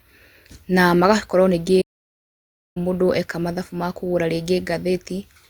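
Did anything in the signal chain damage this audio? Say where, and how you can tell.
Yes. The damage sits at the playback stage: a playback stall. The speech cuts out in mid-flow at 1.81 s, right after "na magakorwo ningĩ", and the output stays silent until 2.77 s, a gap of about 0.94 s. It then resumes with "mũndũ eka mathabu makũgara". The player likely ran dry of buffered data or had its output thread blocked, so nothing reached the output until it recovered.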